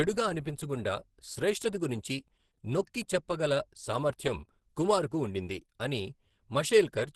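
A short speech recording carries Opus compression damage throughout, plainly audible from start to finish. The sound has the muffled, hoarse character of the codec's hybrid speech mode, with the upper band rebuilt coarsely rather than captured in detail, giving a grainy, rough texture instead of a clean top end. The likely cause is encoding at a very low rate, and the degree of damage fits roughly 16 kbps at super-wideband bandwidth.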